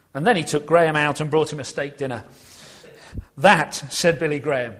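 Nothing goes wrong anywhere in the clip, so there are no technical faults to point out here.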